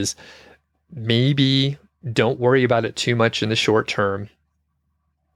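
At 3.02 s there's a bit error spike: one flipped bit throws a single sample to about -18 dBFS and straight back, giving one sharp, broadband tick.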